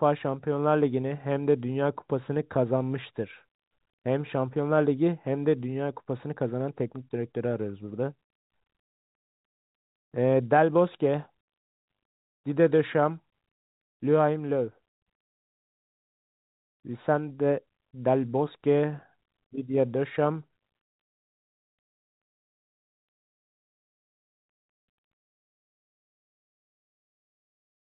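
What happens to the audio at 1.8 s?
Nothing goes wrong at 1.8 s: the speech there is intact, carried through the same narrow telephone band, with nothing above 4 kHz, as the rest of the clip.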